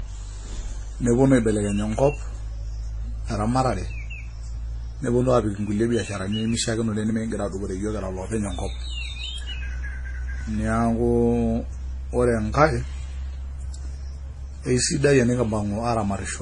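Throughout, the speech has likely been transcoded between lossy codecs, ending in MP3. Stacked artefacts from each stage blur together, and nothing survives above 10.4 kHz.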